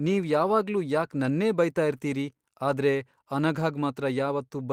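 No faults heard anywhere in this speech recording.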